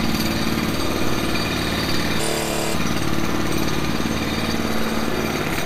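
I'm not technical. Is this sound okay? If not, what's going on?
No, there's a glitch. From about 2.20 to 2.75 s the audio is read two samples at a time, so it plays at double speed. For that half-second the playback grabs pairs of samples as if they were one step, either mistaking one stream for two channels or treating each sample as twice as wide. Everything rushes by twice as fast and jumps a full octave higher.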